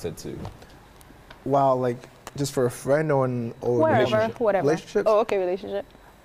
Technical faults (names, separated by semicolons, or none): loud pop